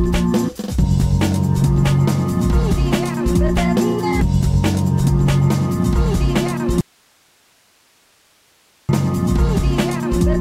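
At 6.81 s the sound cuts off abruptly and does not return until 8.89 s, an audio dropout to a faint residue lasting about 2.08 s. The gap holds only low hiss, around 40 dB below the signal, so the path stayed live while the wanted signal was likely lost upstream. On a waveform the envelope collapses to a thin noise band with sharp edges; a spectrogram shows a uniform, diffuse noise floor replacing the content.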